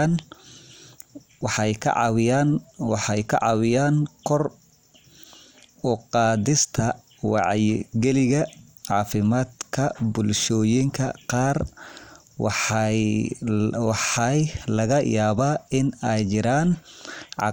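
Right after "wacyigalinta cafimaadka", from 10.42 to 10.44 s, there's DAB burbling: stray bit errors, around a tenth of a percent, corrupt sub-bands, giving quick blips of noise over the speech.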